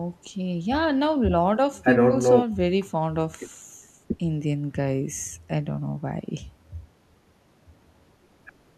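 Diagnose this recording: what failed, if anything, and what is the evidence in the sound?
Nothing failed: the sound of this recording gives no evidence of any fault at any stage.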